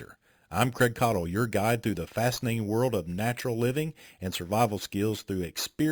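Right through the speech there's imaging from sample-and-hold upsampling: repeated samples, no smoothing, so a metallic fizz sits about 17 dB down, mirrored between 5.5 and 11 kHz.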